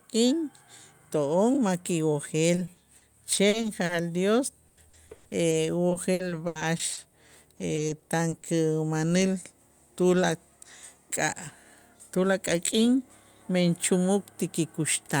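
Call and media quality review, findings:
Repeated packet loss (robotic sound), four bursts at 2.55–3.91 s, 4.67–5.53 s, 5.89–7.13 s and 7.57–8.45 s. Choppy speech with pieces missing. Jitter buffer or network path keeps dropping packets, and concealment stretches the last audio over each hole. Worst at 4.67–5.53 s, where gaps reach 100 ms and roughly a third of that stretch is patched. Elsewhere longest gaps run 20–80 ms.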